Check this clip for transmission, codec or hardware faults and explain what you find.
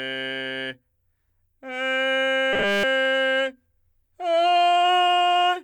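There's one fault in the music: robotic sound from repeated short buffers, from 2.53 to 2.83 s. The music hardens into a rigid, metallic buzz at 200 Hz for most of that stretch. The likely cause is starved playback looping its last buffer, which fits a 5 ms chunk repeating while the real audio gets skipped.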